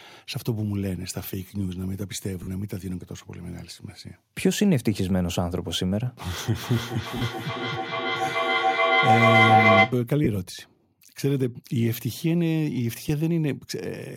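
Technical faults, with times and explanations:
2.43 to 2.47 s, 7.17 to 7.22 s, 10.24 to 10.27 s and 13.09 s: lost LE Audio frames. The gaps last 45 ms, 45 ms, 22.5 ms and 7.5 ms. Those lengths fit 7.5 ms LC3 frames. The decoder had nothing to play, so it repeated the last spectrum with random signs. Tonal sound turns into a brief noisy smear.
6.46 to 10.06 s: feedback echo between two devices. Two devices on the same call share a room. One plays what the other's microphone sent, and that microphone picks it up again. Each echo canceller only removes its own device's output, so the loop stays open. The sound returns about every 400 ms, thinner and more ringing each pass. The loop is loud, peaking about 6 dB above the speech, so the repeats pile up.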